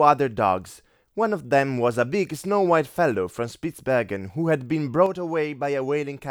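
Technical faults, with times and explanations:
5.06 to 6.31 s, one channel drops out: the speech falls abruptly by about 6 dB and stays lower to the end. The likely cause is one stereo channel going silent, so the mono sum loses half of everything both channels shared.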